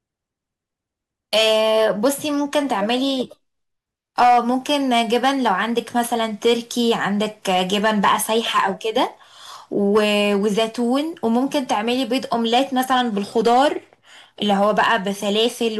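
Throughout the speech there is a gritty crackle riding on the loudest moments, a brief rasp each time the level peaks. This is hard clipping: the signal reaches a stage at about 6 dB beyond what it can pass, so the tallest peaks are sliced flat. Only around one percent of the waveform is cut, which is why it sounds like scattered crackle rather than constant fuzz, but each flattened top sprays harsh upper harmonics.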